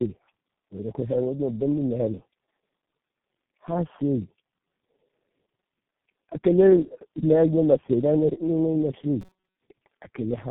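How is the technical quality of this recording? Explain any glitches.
The quality is quite rough. It's narrowband and heavily processed the whole way through, with one short burst of robotic buzz near the end.

Tandem speech coding runs throughout. The speech has that rough, muffled, warbly character you get when a call has been decoded and re-encoded several times over. It sounds like four low-rate speech codecs stacked up, which fits a chain ending in G.723.1 at around 6.3 kbit/s. Each coder has to work from the previous one's damaged output, so the errors pile up.

Robotic sound from repeated short buffers appears from 9.21 to 9.57 s. The speech turns into a stiff, metallic buzz at 188 Hz that still loosely tracks the speech. The likely cause is new audio arriving too rarely, so the player keeps looping a tiny chunk of about 5.3 ms while most of the real audio in that stretch is dropped. 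That looping is what forces the fixed pitch.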